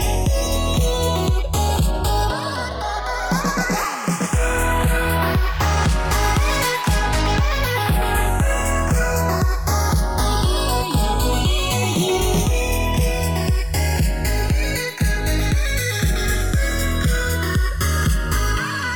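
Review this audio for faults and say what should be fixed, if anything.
The two channels are drifting apart across the whole clip. They appear to run from separate clocks that disagree by roughly 50 parts per million. The offset between left and right grows steadily, reaching somewhat under a millisecond by the end. Summed to mono, this sliding delay creates comb-filter notches that move slowly through the spectrum. The result is a gradual flanging sweep. To prevent it, lock both recording devices to a single shared word clock.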